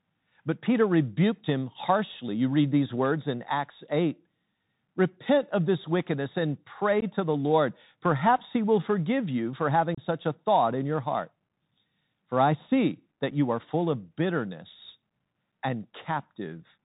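The speech runs through a Bluetooth CVSD headset codec throughout. Its one-bit 64 kbps stream cuts everything above 4 kHz. S sounds turn scratchy over a granular hiss.

Unconcealed Bluetooth headset packet loss follows. At 7.01 to 7.04 s, after "of this wickedness and", about 15 ms of audio drops out, fitting roughly two lost packets. A longer 30 ms hole opens at 9.95 to 10.0 s, after "forgive you for having", fitting about four packets. At 13.31 s, after "I see that", one 7.5 ms gap fits a single packet. Each gap has abrupt edges, and the speech resumes briefly quieter.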